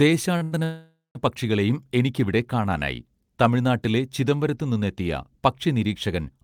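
Two late packets emptied the jitter buffer, causing a short stall from a late packet at 0.37 s (35 ms) and again at 0.43 s (88 ms), holding the sound too long with nothing lost. From 0.64 to 1.17 s comes a call audio freeze, likely from packets held up in transit: the receiver fills about half a second with a fading buzz or hiss that ends in roughly 180 ms of silence before the audio resumes where it stopped.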